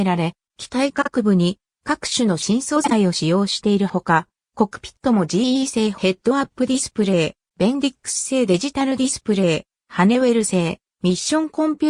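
Brief garbled flutters at 1.01–1.09 s and 2.84–2.92 s in the audio are frames out of order: two neighbouring 26 ms blocks play swapped, which fits single exchanged frames.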